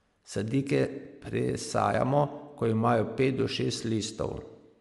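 Throughout the speech the top of the spectrum is missing, with nothing above 11.5 kHz, and the upper band carries a breathy, grainy texture instead of clean detail. This is most likely Bluetooth LC3 compression: the transform codec has discarded much of the high-frequency content and substituted shaped noise, and the damage is plainly audible. The character fits 10 ms frames at around 48 kbps.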